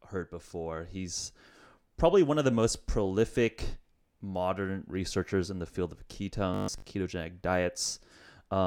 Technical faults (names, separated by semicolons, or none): robotic sound from repeated short buffers